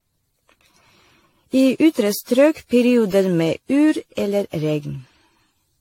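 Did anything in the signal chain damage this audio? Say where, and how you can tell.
Yes. Generation loss runs through the whole speech clip at the codec stage. The sound is swirly, hollow and smeared, with blurred attacks and nothing above 16.5 kHz, which fits a 64 kbit/s AAC-LC chain, likely re-encoded around ten times, each pass stacking fresh quantisation noise and spectral holes.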